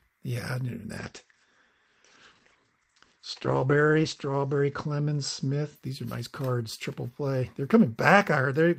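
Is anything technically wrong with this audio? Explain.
Yes. From 0.98 to 5.81 s there is a call bitrate drop. The encoder was squeezed to what sounds like roughly a quarter of its earlier rate, near 12 kbps. It codes more coarsely and cuts its bandwidth from 20 kHz to 8 kHz, bottoming out for about 3.2 s. The audio turns muffled and rough. On a spectrogram, everything above 8 kHz disappears for that stretch, then returns.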